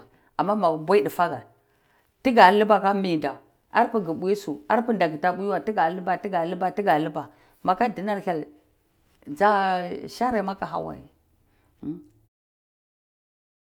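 Nothing in this speech clip calls for attention; the level just eases down in a smooth fade-out from around 12 s, finishing at 12.29 s, the way an editor would close off a recording.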